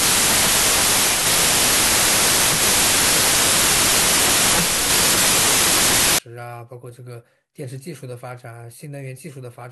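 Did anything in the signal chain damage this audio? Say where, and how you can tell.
Yes: a wrong sample width at sample-format conversion, 0 to 6.18 s. It fits packed 24-bit data read as 32-bit. Speech runs 1.33 times fast under loud noise, which shows as a broadband wash on the spectrogram.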